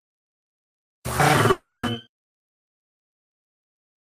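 A call audio freeze runs from 1.51 s to 1.85 s. The sound stalls and is stretched into a fading buzz or hiss continuing its last moment for about 320 ms, never dropping to silence, then resumes exactly where it stopped with nothing skipped. The likely cause is packets delayed in transit, so the jitter buffer ran dry and the receiver improvised filler until they arrived. Everything afterwards plays about 320 ms later than before.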